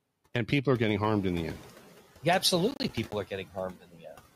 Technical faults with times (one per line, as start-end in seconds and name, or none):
0.00-4.35 noise suppressor artifacts
2.71-3.13 processor overload crackle
3.73-4.15 speech cut by the noise suppressor